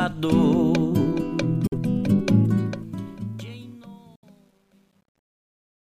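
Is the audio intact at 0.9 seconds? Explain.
Yes, the audio is intact at 0.9 seconds, with no fault at that point.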